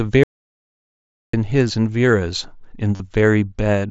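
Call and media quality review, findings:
Audio dropout to silence, 0.23 to 1.34 s. Sound cuts out for about 1.1 s. The gap is silent, with no room tone. Input likely lost upstream, a device disconnect or link failure, while the encoder kept writing silence. Content in the gap is unrecoverable.

Concealed Bluetooth headset packet loss, 2.96 to 3.00 s. Brief buzzy sustain of about 40 ms, then a small warble as real audio resumes. Component is the headset radio link. Several consecutive voice packets were lost, which fits about five mSBC frames. The receiver filled the gap by repeating the closest-matching recent waveform. The mSBC path itself sounds normal: band-limited to 8 kHz, with light grain on loud passages.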